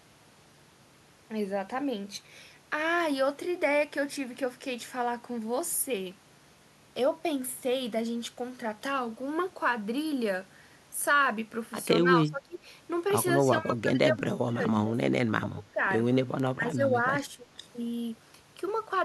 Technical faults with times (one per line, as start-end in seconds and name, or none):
12.02-12.66 speech suppressed in double talk
13.40-15.81 speech suppressed in double talk
16.54-17.48 speech suppressed in double talk